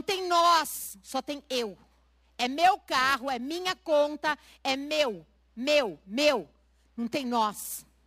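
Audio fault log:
throughout, periodic clock jitter: the converter clock is wobbling at around 2 kHz, which spreads sidebands round the speech and gives it a rough, metallic edge.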